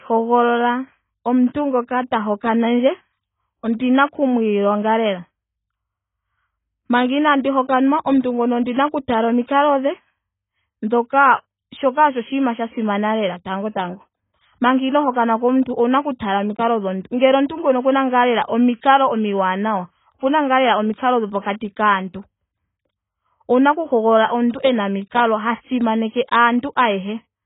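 From start to finish the speech carries heavy AAC compression damage. Nothing reaches above about 3.8 kHz, so the top end is simply gone and the sound is dull and muffled. The codec has too few bits to spend. It drops the upper bands and quantises what remains coarsely. Sibilants turn fizzy and smeared. Sustained sounds warble. The bandwidth and texture point to AAC-LC at around 16 kbps, which is the likely cause.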